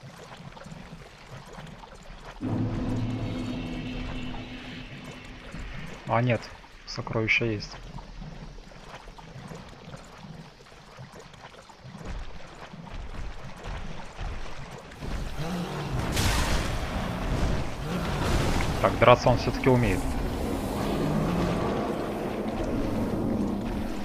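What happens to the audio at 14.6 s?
Nothing goes wrong at 14.6 s; the audio plays through that moment intact, with no dropout, click, distortion or other fault.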